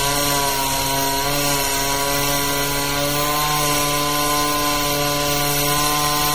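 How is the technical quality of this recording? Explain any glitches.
The recording has clearly audible damage running through the whole clip, most likely from MP3 compression at a low bitrate, which fits something around 48 kbps. The encoder divides the audio into many narrow frequency lines and, short on bits, drops the weaker ones. Those lines flicker on and off between frames, giving a watery, swirling texture with metallic chirps on bright content and smeared transients. The treble still extends to about 20.7 kHz, so the damage is this swirl rather than a dull top end.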